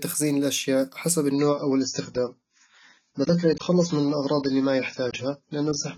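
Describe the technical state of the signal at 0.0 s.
At 0.0 s the signal is intact, with no dropouts, clipping, distortion or other audible faults.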